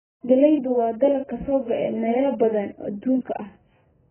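From start to finish the speech has that dull, band-limited quality: nothing comes through above about 3.1 kHz, so sibilants lose their edge and turn into a soft fizz, and sustained vowels pick up a watery warble. That's likely AAC compression, AAC-LC run very hard. The encoder pulled its cut-off way down, which points to a very low bitrate, somewhere around 10 kbps.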